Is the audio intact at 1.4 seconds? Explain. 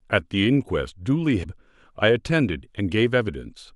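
No. From 1.40 to 1.45 s, about 54 ms, the speech is hit by damaged data in a compressed stream. Some of the encoded bytes in that stretch are wrong, so the decoder either misinterprets the affected frames or discards them, loses its place in the bitstream, and has to hunt for the next valid frame header before normal decoding resumes. During that gap the output comes out as a short chirp, squawk, click or hole that cuts into the speech.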